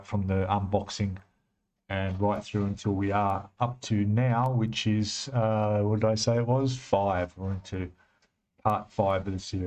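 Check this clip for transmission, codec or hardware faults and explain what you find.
No transmission, codec or hardware faults.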